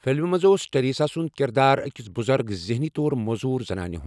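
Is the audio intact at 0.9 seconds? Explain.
Yes, the audio is intact at 0.9 seconds, with no fault at that moment.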